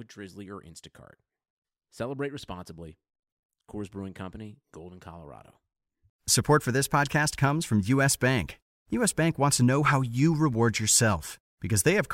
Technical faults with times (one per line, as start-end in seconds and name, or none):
none